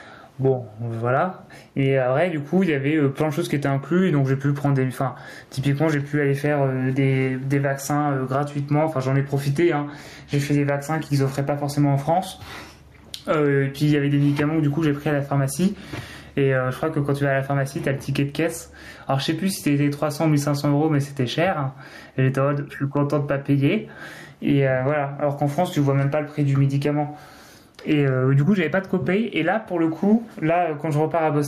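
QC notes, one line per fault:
Throughout, gain pumping: the level is pulled down as soon as the speech gets loud, a swing of around 10 dB, so loud and quiet passages sit squashed together. The likely cause is microphone gain set far too high with a fast limiter or compressor clamping each loud sound. Unlike a noise gate, the background never drops out, and the room noise sits about 45 dB under the speech.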